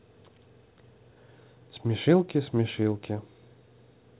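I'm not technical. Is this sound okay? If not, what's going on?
Yes, this sound is okay.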